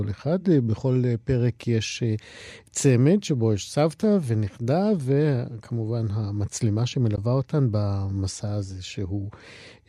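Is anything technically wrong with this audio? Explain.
Yes, there's one glitch. Around 7.16 to 7.18 s the speech cuts out briefly, and about 13 ms of audio is simply missing. The gap has abrupt or briefly faded edges and the speech picks up further along, as though it kept running during the hole. That's likely a Bluetooth dropout, where a packet didn't reach the headphones in time, got discarded, and left silence until the next good one arrived. A gap this short fits a single lost packet.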